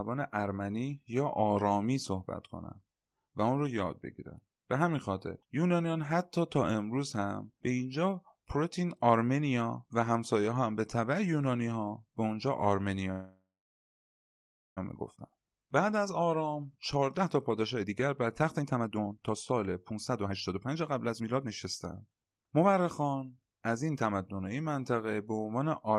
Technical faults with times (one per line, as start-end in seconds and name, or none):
13.11-14.79 call audio freeze
16.96-24.21 jitter buffer speed-up